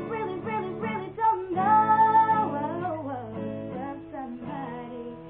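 Nothing technically wrong can be heard in this audio. There are no timed events or causes to report anywhere in it.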